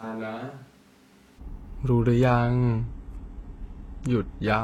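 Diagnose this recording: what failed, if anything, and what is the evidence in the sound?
From the start until 1.38 s the speech sounds hollow and roomy, thin in the bass, about 10 dB quieter, with room noise sitting about 25 dB beneath it. At the capture stage, this is likely a switch to a distant microphone, with the close microphone's feed missing until 1.38 s.

From 2.01 s to the end, the treble abruptly dulls and codec artefacts rise, with nothing above 12.3 kHz, and there is no gap. This is a network-stage fault: an adaptive stream at a lower bitrate, with the player dropping to a leaner codec setting. The sound fits a fall from around 96 kbit/s to about 16 kbit/s.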